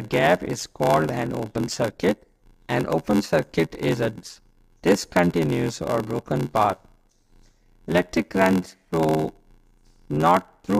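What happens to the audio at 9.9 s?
At 9.9 s the block size mismatch (padded) that runs through the whole clip is still present. One stage hands over blocks shorter than the next stage expects, and each block is topped up with zeros, which fits a 512-sample read size. Those silent gaps recur at about 86.1 Hz, heard as a steady buzz, and the sound plays at 0.861 times its normal speed while keeping roughly its usual pitch.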